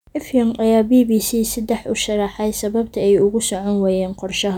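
A short recording of speech, with no technical fault to be heard anywhere in it. Nothing in the signal calls for a time or a cause.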